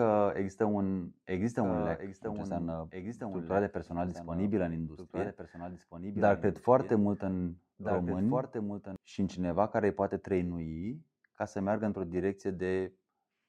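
From 1.64 s, right after "există un există", a doubled audio track appears: a second full-band copy of the speech runs roughly a second and a half behind the original, about 10 dB quieter. It carries no reverberant tail or room colouring, so it reads as a distinct overlapping pass rather than an echo. It cuts in and out abruptly, ending at 8.96 s before "și în cineva care". This is likely a slower second capture path mixed back in.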